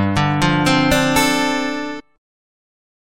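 A stream segment skipped at about 1.99 to 2.01 s: the audio jumps abruptly forward, with a brief blip at the join lasting roughly 20 ms. The continuity breaks because material that should come next is absent, and the sound resumes at a later point. The likely cause is a segmented stream in which one chunk failed to load, so the player discarded it and carried on from the following segment.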